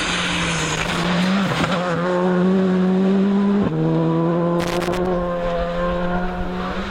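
At 0.72 s an irregular burst of crackle and scratching breaks into the sound and lasts until 1.07 s. It returns from 4.60 s to 5.07 s. Both bursts are loose connector crackle: a worn or dirty contact in the signal path is intermittently making and losing connection as it shifts. This chops the audio into fragments, and any DC present on the line adds pops.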